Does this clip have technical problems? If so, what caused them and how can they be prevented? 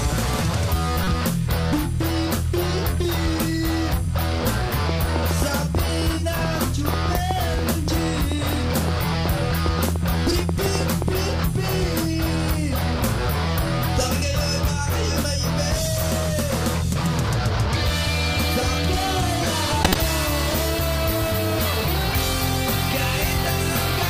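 Yes. Corrupt frames decoded cause short glitches at 1.04–1.10 s and 19.83–19.96 s, each spanning about four frames, the second about 10 dB stronger than the first. Damaged compressed data was decoded anyway, scattering energy across the wrong frequencies. Error-checking on the stream, with the decoder muting or concealing any frame that fails, would prevent this.

A train of clicks, about forty irregular ticks at roughly 5.65 per second and some 10 dB above the sound, runs from 4.89 to 11.09 s, likely from interference or a faulty connection. Shielded cabling, distance from noisy equipment and a stable interface connection would prevent it.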